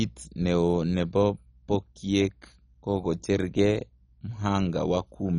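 All the way through, the speech sounds dull and gurgly, with nothing above 10.4 kHz, which is likely MP2 compression at a very low bitrate starving the upper sub-bands.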